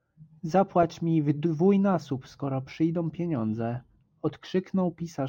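Imaging from linear upsampling runs throughout this speech: straight-line interpolation, consistent with a 22 kHz to 44.1 kHz conversion, dulls the top and leaves faint mirrored images from about 11 kHz to 22 kHz, roughly 45 dB down, adding slight metallic shimmer to sibilants.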